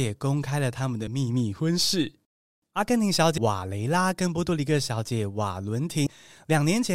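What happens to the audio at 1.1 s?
A short glitch cuts through the speech from about 1.07 to 1.10 s, lasting only around 30 ms. It comes from damaged data in a compressed stream: a small stretch of the encoded bytes there is corrupted, so the decoder misreads those frames, loses its place in the bitstream and has to hunt for the next valid frame header before normal playback resumes.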